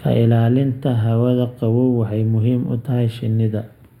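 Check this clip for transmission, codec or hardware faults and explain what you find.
One fault runs through the whole clip: channel delay (comb filtering). One channel arrives a few samples late, under a tenth of a millisecond, and when the two are summed to mono, the content they share cancels at evenly spaced frequencies. With so short a lag, the first notch falls high, around 7 kHz, so the speech loses air and sibilant detail, sounding dull and phasey.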